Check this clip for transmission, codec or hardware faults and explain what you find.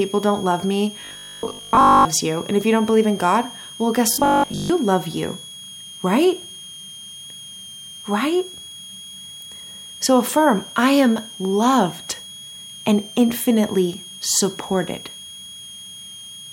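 Two faults are present in this speech clip.

A switching supply whistle runs throughout. It is a thin tone between 3.19 and 3.34 kHz, roughly 20 dB below the speech. It comes from a power supply pulsing audibly.

Robotic sound from repeated short buffers occurs from 1.01 to 2.09 s, after "don't love me", and from 4.14 to 4.70 s, before "love you". The speech becomes a rigid, metallic 50 Hz buzz. This is likely caused by 20 ms chunks repeating while most of the real audio is skipped.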